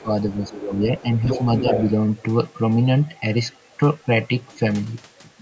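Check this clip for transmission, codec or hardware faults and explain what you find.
The clip has two echo-control faults, both typical of a call's echo canceller.

Speech suppressed in double talk, 0.02–0.1 s and 0.49–1.05 s: with both sides talking, the canceller likely ducked the speech by up to about 15 dB, leaving it dipped and patchy.

Other side's voice leaking through, 0.31–0.64 s, 0.82–1.03 s and 1.25–1.93 s: likely incomplete echo removal. A second voice is faint at first, then nearly as loud as the speech, only about 5 dB down.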